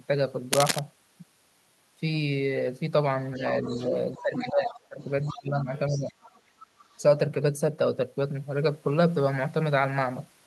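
From 0.53 to 0.79 s a burst of dense, ragged scratching sits over the speech, roughly as loud as the speech itself. This cable scratch noise likely comes from a worn cable, connector or control shifting and making its contact flicker.

From 3.35 to 7.02 s the other side's voice leaks through as a second voice, well below the speech at around 15 dB down. The far end is likely playing from a loudspeaker, with the echo canceller leaving part of it in the microphone.

During that stretch the speech is suppressed in double talk. There is a brief, slight dip from 3.37 to 3.42 s. From 4.18 to 6.14 s the voice sinks and breaks up, falling by as much as about 20 dB for roughly a second and a half in total. The canceller likely mistook the local talker for echo and turned both down.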